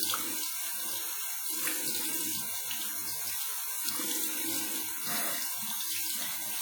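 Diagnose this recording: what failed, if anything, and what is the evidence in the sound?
Throughout, the sound rings and smears, with a washy hiss that breathes with the signal. This points to the codec stage, likely WMA compression at a low bitrate fitting 48 kbps. Long transform blocks spread quantisation noise across tens of milliseconds and zero out weak components.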